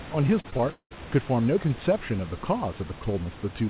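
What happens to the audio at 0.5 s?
At 0.5 s the audio falls inside a stretch of repeated packet loss (robotic sound) running from 0.40 to 0.97 s. Packets go missing again and again, and each gap is bridged by extending the last received sound, so nearly half the span is concealment rather than real signal. The longest hole lasts about 191 ms. The speech turns choppy, with pieces dropped outright, heard through the call's band limit at 4 kHz.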